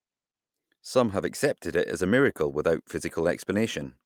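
No technical faults are audible anywhere in the speech.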